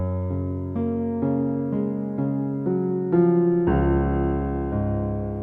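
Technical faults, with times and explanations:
No technical faults can be heard anywhere.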